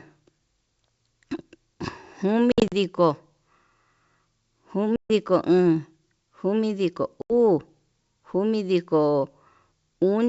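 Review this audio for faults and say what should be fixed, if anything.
Packet loss on an ADPCM call occurs at 2.52 to 2.73 s (120 ms lost in gaps over 200 ms, longest 60 ms), 4.96 to 5.10 s (140 ms) and 7.22 to 7.32 s (80 ms). Each packet gap becomes hard-edged silence, and the decoder's predictor and step size drift from the sender's, so the speech resumes slightly distorted before resettling. A jitter buffer with packet-loss concealment and decoder-state resynchronisation would mask these holes.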